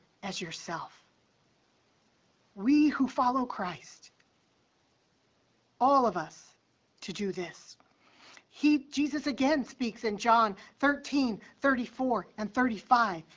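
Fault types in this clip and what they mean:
There are no fault types in this clip.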